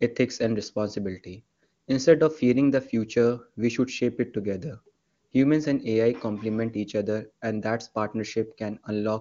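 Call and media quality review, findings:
No faults found in this speech clip. The AMR wideband (HD Voice) path runs at its top rate of 23.85 kbit/s, and any coding effect on the speech is faint at most.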